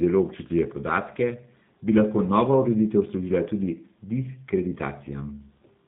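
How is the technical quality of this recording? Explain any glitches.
The recording is limited by heavy low-bitrate voice coding throughout. Across the whole speech clip, G.729 codec damage is plainly audible. The coder rebuilds speech from a vocal tract filter, a pitch estimate and a few pulses per frame, which fits an 8 kbit/s G.729A stream. Nothing passes above 4 kHz, and the voice sounds rough and synthetic. A plain telephone band filter would only dull the sound, without that buzzy, reconstructed texture.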